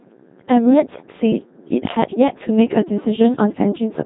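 Speech, passed through the Codec 2 vocoder across the entire clip, with heavy damage. It sounds robotic and buzzy because the decoder rebuilds the voice from sine waves using only pitch, voicing, energy and envelope. Nothing is present above 3.8 kHz, which fits a 2.4 kbit/s mode.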